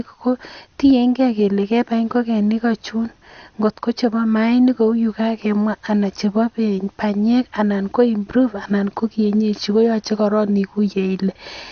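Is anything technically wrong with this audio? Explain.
Yes. Throughout the speech there is damage consistent with MP2 compression, likely from MPEG Layer II encoding at a low bitrate, which fits something around 48 kbps. Nothing is present above 6.5 kHz, so the sound is dull. The encoder divides the spectrum into 32 sub-bands and shares out bits among them. With too few bits, the upper bands are switched off and the remaining ones are coarsely quantised, giving a plainly audible gurgling, granular texture.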